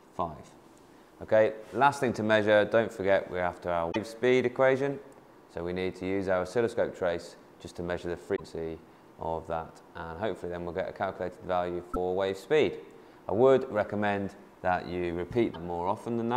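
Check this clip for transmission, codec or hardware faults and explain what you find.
There is one fault, repeated four times: short disruptions at 3.91–3.96 s, 8.35–8.40 s, 11.93–11.97 s and 15.53–15.56 s. Each lasts 30 to 56 ms. The audio skips ahead, followed by a brief chirp, a burst of noise or a gap. The likely cause is a broken MP3 bit reservoir. Frames went missing, so the next ones pulled their borrowed data from the wrong bytes. The lengths fit one or two 26.1 ms frames.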